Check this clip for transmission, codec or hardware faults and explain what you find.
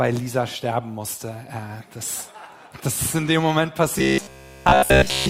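One fault is present. From 3.99 s to 5.29 s there is robotic sound from repeated short buffers: a rigid metallic buzz at 66.7 Hz. The likely cause is late-arriving audio, with a buffer of about 15 ms looped in place of all the real signal.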